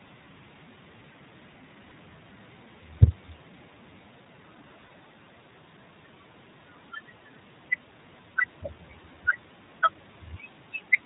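The iLBC codec is present from start to finish: nothing above 4 kHz survives, and the speech has a slightly rough, synthetic edge with plainly audible coding damage. iLBC codes each frame's excitation on its own, without borrowing from the previous frame. The texture points to the 20 ms frame, 15.2 kbps mode, a narrowband VoIP coder that trades brightness and smoothness for robustness.

Lost iLBC frames occur at 1.88 to 1.93 s, 4.86 to 4.92 s and 7.34 to 7.37 s. The first two gaps each last about 40 ms, which fits two missing frames; the third fits a single frame. In each gap the decoder repeats the last pitch cycle blended with noise, producing a brief held, faintly buzzy vowel. Because every iLBC frame decodes independently, the speech recovers almost immediately afterwards.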